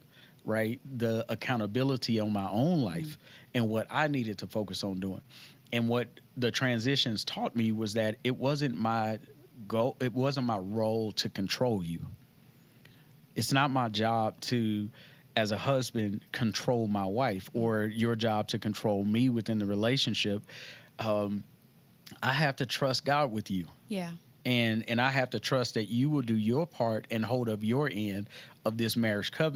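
The sender's audio clock runs about 2 percent slower than the receiver's, so there is clock drift between sender and receiver for the whole of this speech clip. Samples arrive slightly too slowly for the playback side, and the jitter buffer keeps draining toward empty. The receiver has to make up the shortfall, and the mismatch never settles. It keeps pulling against playback from start to finish.

To cope, the receiver makes repeated timing corrections from 0.15 s to 29.52 s, each time stretching the audio by repeating a short piece rather than cutting one. Every edit goes the same way, lengthening the audio, and together they add roughly 0.7 seconds, so playback runs at about 98 percent of the sender's pace. The edits fall at uneven intervals and each is tiny. They come through as faint hiccups and a slightly unsteady, dragging tempo in the speech.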